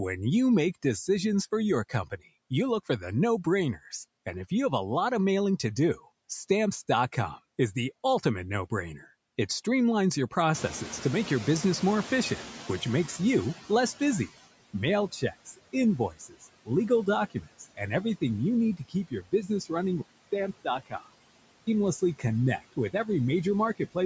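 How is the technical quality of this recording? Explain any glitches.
The recording is held back by a heavy-handed noise suppressor, a slow response when the background gets louder, and a brief drop to a poorer-sounding input near the end.

Noise suppressor artifacts run through the whole clip. The suppressor pulls down whatever bands it judges to be steady noise by about 20 dB, recalculating frame by frame, so the gain keeps shifting. The background sinks in the gaps and swells back under the speech.

Speech is cut by the noise suppressor at 1.89 to 2.51 s, 15.12 to 17.81 s, 18.77 to 19.71 s, 20.64 to 21.04 s and 22.58 to 22.94 s. In each case the suppressor mistook quiet parts of the speech for noise and turned them down with the background, by about 14 to 20 dB at the deepest point. Soft consonants and word endings sound swallowed or fade out. The longest stretch, around 15 to 18 s, loses the most.

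The noise suppressor catching up is audible from 10.54 to 14.35 s. At about 10.5 s the room noise jumps by roughly 17 dB, but the suppressor's noise estimate is still set for the quieter background. For about 3.8 s the louder noise gets through with less reduction than before. It then recedes as the estimate adapts and the usual reduction of about 17 dB returns.

At 20.02 s the input likely switched to a poorer device, probably another microphone or a headset in call mode. There is a gap of about 200 ms at the switch. Afterwards the narrower band turns the sound dull and boxy, although the level stays about the same. A new noise floor appears, roughly 35 dB below the speech. The fuller sound returns at 21.67 s.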